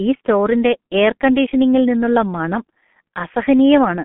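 From start to finish the speech is muffled and hoarse, with smeared consonants and nothing heard above about 3.8 kHz. This is heavy G.723.1 codec damage. A roughly 6 kbit/s coder in 30 ms frames rebuilds speech from a slowly updated model, squeezed into a telephone band of 150 Hz to 3.4 kHz.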